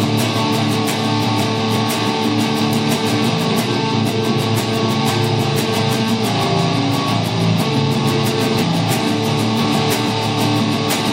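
From 1.18 s to the end at 11.13 s, a mains buzz sits far below the sound. Switching spikes at twice the 60 Hz mains rate inject harmonics into the kilohertz range, so it rasps, unlike a smooth, low hum.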